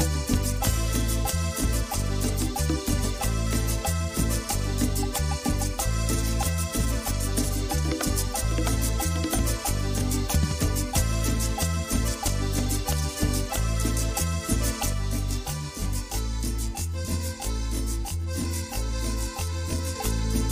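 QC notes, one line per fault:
14.93–19.96 s, channel delay (comb filtering): One channel arrives late by around 20 ms, and the two are summed to mono, so material common to both cancels at a ladder of evenly spaced frequencies. The first notch sits down at a few tens of hertz and the rest repeat closely up the spectrum. The sound turns rough and slightly doubled, with fixed notches that don't move for the whole stretch.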